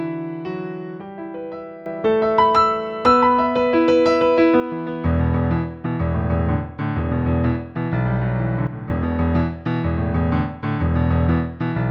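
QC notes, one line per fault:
1.86–4.60 s and 8.67–8.90 s, sudden gain jump: a digital gain setting was likely applied from one sample to the next with no ramp, first lifting the level by about 12 dB for 2.7 s, then cutting it by about 10 dB for 0.23 s. Because the change lands ahead of any noise floor separation, the background noise steps up and down together with the wanted sound, so each edge is heard as an abrupt jump in loudness.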